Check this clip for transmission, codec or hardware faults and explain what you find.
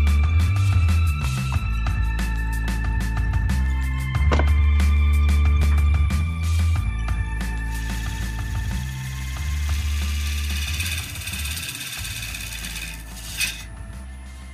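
One fault is present. Block of digital silence at 5.63 s: a roughly 5 ms stretch of samples drops abruptly to silence, likely because the output buffer wasn't filled in time, heard as a single sharp tick.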